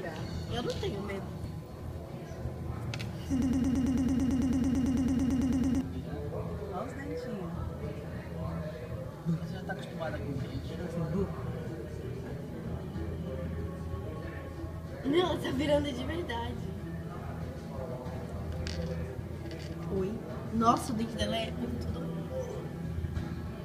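At 3.42 s a broken-record loop begins. A fragment of about 0.11 s repeats exactly, back to back, some 22 times until 5.81 s. It sounds like a rapid mechanical stutter. The likely cause is a stalled player or stream resending its last buffer. The audio from that span is lost.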